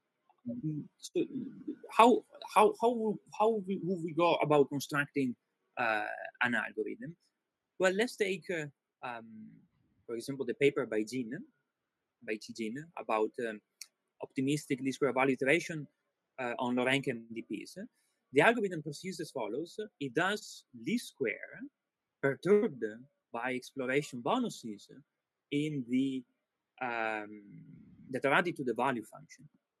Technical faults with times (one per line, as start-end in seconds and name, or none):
0.01-0.45 sound cut by the noise suppressor
5.37-5.77 sound cut by the noise suppressor
9.62-10.06 sound cut by the noise suppressor